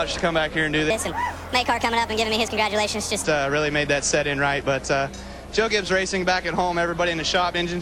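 From 0.90 s to 3.24 s there is a wrong sample rate fault: samples were played back faster than they were captured, with no conversion between the two rates. The ratio fits audio recorded at 32 kHz being played at 44.1 kHz. Speed and pitch rise together, so the passage runs about 1.38 times too fast and sits about 5.5 semitones sharp. The sound is audibly higher and rushed until 3.24 s.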